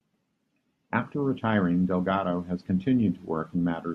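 No technical faults can be heard in this recording.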